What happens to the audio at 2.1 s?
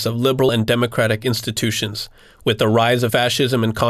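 Nothing goes wrong at 2.1 s: the speech carries on intact through that moment, with no dropout, click or other fault.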